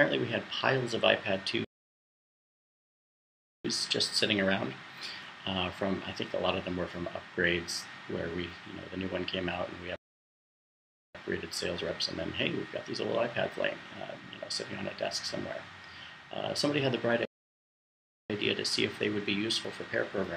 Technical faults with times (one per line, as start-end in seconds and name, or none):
1.64-3.65 playback stall
9.96-11.15 playback stall
17.25-18.30 playback stall
19.65 overlap between stream segments